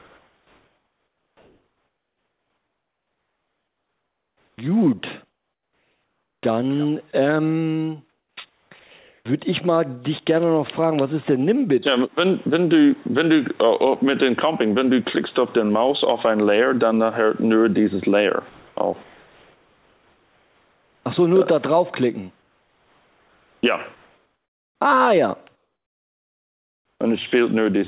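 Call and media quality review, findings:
Comfort noise in place of the background: 0.0–6.43 s, 8.09–9.25 s, 18.49–21.05 s, 22.39–23.63 s, 25.55–26.99 s. Live background swapped for steady, featureless hiss. Likely sender discontinuous transmission, receiver synthesising shaped noise. At 22.39 s about 4 dB quieter (background about 42 dB below loud parts). At 25.55 s about 9 dB quieter (about 51 dB below). Unlike a dropout or packet loss, the gap is filled rather than silent, and nothing meaningful is cut.

Sound dropped by the voice detector: 7.11 s. About 10 ms of actual sound clipped and replaced by the same flat noise. Likely the sender's detector misjudged a quiet passage as background and muted the stream. Distinguished from the comfort-noise spans because real content is lost here, not just background texture. Brief, filled with noise rather than a hard gap. Band limit near 4 kHz throughout points to a narrowband call codec.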